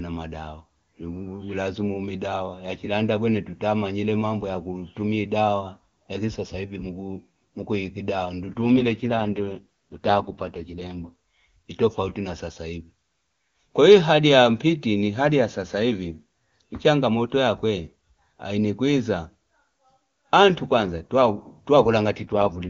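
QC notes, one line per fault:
8.62 to 11.10 s and 22.22 to 22.69 s, AMR rate drop: the speech turns rough and synthetic with no gap or loss of band, then clears. This fits the AMR-WB codec being pushed from its 23.85 kbit/s rate down to about 6.6 kbit/s on a weak link.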